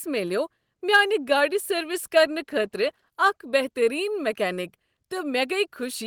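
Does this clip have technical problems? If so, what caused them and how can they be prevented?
Yes. A call bitrate drop from 1.8 to 3.17 s, just before "اکھ بہتٔریٖن", makes the speech sound rougher and more coarsely coded, which fits the rate falling from 32 to about 17 kbps for 1.3 s. Prevention: give the connection more steady upstream bandwidth, or set a higher minimum encoder bitrate.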